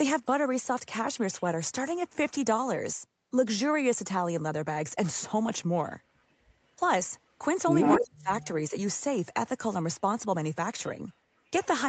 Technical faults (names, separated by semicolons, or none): echo leak; speech suppressed in double talk